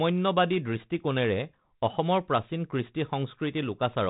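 No technical faults are audible.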